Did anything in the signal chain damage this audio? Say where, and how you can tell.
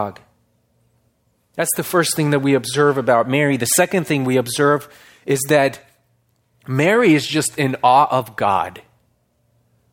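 No, nothing in the signal chain has audibly damaged this speech recording. No stage from capture through to playback leaves any trace a listener can point to.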